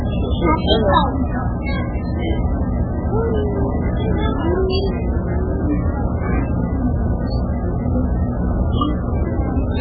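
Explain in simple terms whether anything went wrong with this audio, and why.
Nothing is heard above 4.7 kHz for the whole clip, and the sound turns watery and swirly, with smeared attacks. That points to heavy MP3 compression as the likely cause.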